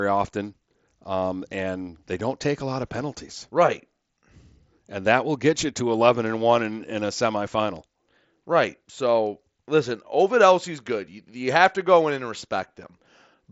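No technical faults can be heard in this speech.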